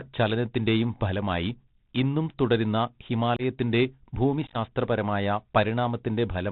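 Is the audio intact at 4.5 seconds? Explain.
No. From 4.47 to 4.57 s there is unconcealed Bluetooth headset packet loss. About 52 ms of the speech drops out, scattered across roughly 75 ms, with no gap longer than 15 ms. This fits a dozen or more short headset voice packets going missing and being replaced by silence or an idle pattern. Because nothing fills the holes, the passage sounds crackly and chopped, with abrupt edges, and the speech briefly comes back quieter. A single dropout or a concealed loss would instead leave one gap or a smeared repeat.

The same moment also carries the Bluetooth CVSD headset codec that runs through the whole clip. It codes one bit per sample at 64 kHz, which fits a 64 kbps link, and passes nothing above 4 kHz. This gives a muffled, narrowband sound with scratchy s sounds and a grainy hiss. That steady texture is unlike the sudden holes of the packet loss.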